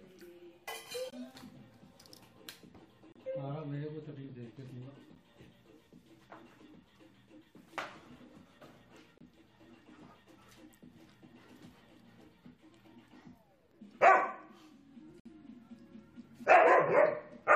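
Short, hard-edged holes of silence cut into the sound at 1.10 to 1.13 s, 3.12 to 3.16 s, 5.15 s, 9.18 to 9.21 s and 15.20 to 15.26 s, lasting from about 11 ms up to 57 ms. They fall on a 2-second grid, which marks them as gaps between stream segments. At each of these points the next segment's timestamps start slightly late, so the player pads the space with silence. The audio pauses and resumes without losing any content.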